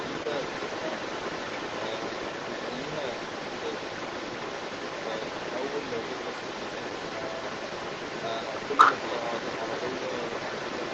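Echo leak runs from 0.0 to 10.9 s. A second copy of the speech trails the original by 244 ms at roughly the same loudness. The likely cause is a far-end loudspeaker whose echo canceller let its microphone pickup travel back down the call.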